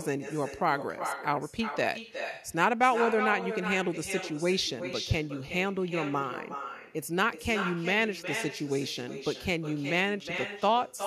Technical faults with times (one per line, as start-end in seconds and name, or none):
0.00-11.06 echo with no canceller